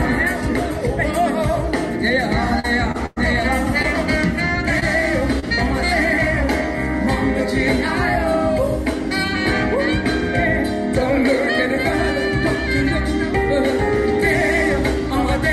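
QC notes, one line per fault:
2.59–2.66 s, 2.92–2.96 s, 3.82–3.86 s, 4.80–4.83 s, 5.39–5.44 s: short concealed packet loss. About 20 to 40 ms of audio never arrived in time. The receiver extended the preceding sound and then blended back into the real signal, so each spot is a brief smear or wobble where a moment of sound is missing.
3.06–3.18 s: burst of packet loss. About 100 ms of consecutive audio was lost. The receiver carried the last sound forward for roughly that span and faded it as the gap went on, producing a held buzz or fading hiss. The sound then resumes with the missing section gone.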